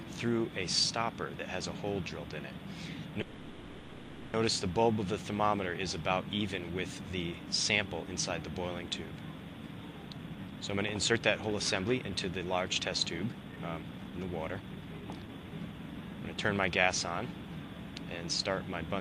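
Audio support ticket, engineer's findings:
Call audio freeze, 3.21–4.35 s: sound stalls into a buzzy, fading continuation of the last sound for about 1.12 s, never reaching silence. Likely cause: delayed packets draining the jitter buffer, so the receiver's concealment fills the gap. Playback then resumes where it stopped, nothing lost, about 1.12 s extra delay. Spectrogram: frozen, smeared last spectrum decaying across the block. Waveform: repetitive, shrinking envelope.

Jitter buffer speed-up, 10.07–12.81 s: audio hurried, about 115% speed, same pitch. Buffer overfull after bunched arrivals. Receiver trims pitch-period-length slices repeatedly, roughly 0.4 s removed in total.

Jitter buffer speed-up, 13.33–16.87 s: same symptom, stronger, about 119% speed, roughly 0.7 s trimmed. Spectrogram: harmonic spacing unchanged, events compressed in time. Waveform: closely spaced splice points between periods.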